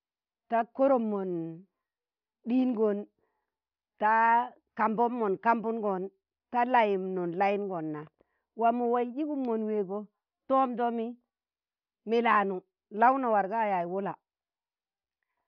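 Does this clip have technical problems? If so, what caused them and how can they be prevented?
No, nothing technical jumps out here, so there's nothing to track down or guard against this time.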